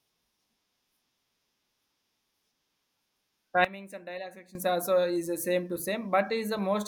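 A sudden gain jump in this speech clip runs from 3.65 to 4.55 s: speech and background noise drop together by about 17 dB, likely from a gain change applied without a ramp.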